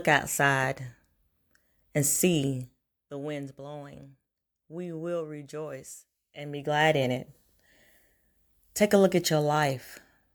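A gain change applied in coarse steps, about a hundred a second, with no smoothing between them, causes zipper noise in this speech. That rate fits an update once per buffer of roughly 10 ms. From 2.61 to 3.06 s the level drops by about 15 dB just before "the winds blowing", and a buzzy ticking rides on the fade. From 6.38 to 7.00 s, between "will rejoice" and "in it", the level rises about 15 dB with the same zipping texture.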